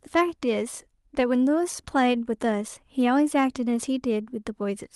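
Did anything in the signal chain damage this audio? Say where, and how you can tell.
No, nothing here points to damage; the speech came over a normal call path whose top end stops at about 12 kHz, which fits Opus running at a moderate bitrate of around 32 kbps.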